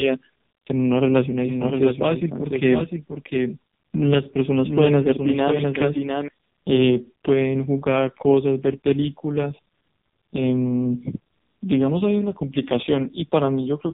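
From start to finish the speech carries the sound of an AMR narrowband mobile codec, and a heavily squeezed one. Nothing gets through above about 3.8 kHz, and the voice comes out buzzy and synthetic, which points to one of the lowest modes, around 5.15 kbps.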